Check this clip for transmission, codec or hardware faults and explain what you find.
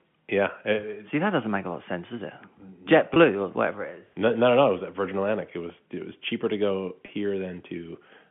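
There are two brief dropouts, both packet loss with pitch repetition. The line carries G.711 telephone coding, with sound limited to about 150 Hz to 3.4 kHz.

At 3.14 to 3.16 s, and at 7.06 to 7.08 s right after "was cheaper to go", about 20 ms goes missing each time. This fits one lost packet. The receiver repeats the last pitch period, so each gap sounds like a short, slightly buzzy hold.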